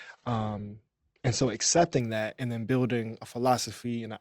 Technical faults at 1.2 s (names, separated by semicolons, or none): adaptive stream starting at a low bitrate